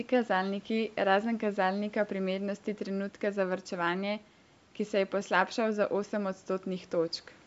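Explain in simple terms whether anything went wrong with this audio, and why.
Nothing went wrong that I could hear in this speech recording; it sounds like it passed through a call's normal microphone processing, which trims away the deepest bass and anything above about 8 kHz, and that is expected rather than a problem.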